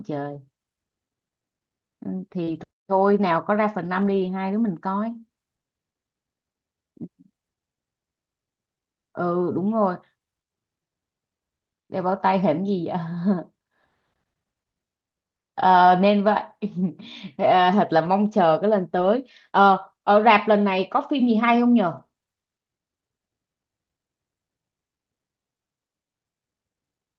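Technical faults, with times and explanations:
0.33, 2.47–2.57, 3.85–4.31, 18.05–18.07, 18.97–19.07, 21.97–21.99 s, lost packet rebuilt from error correction: the next packets carried low-bitrate backup copies, so no gaps, just rougher, noisier patches, longest around 3.9–4.3 s.
2.43–2.49 s, short concealed packet loss: about 40 ms never arrived, so the decoder stretched the preceding sound to fill it, giving a brief smear before blending back.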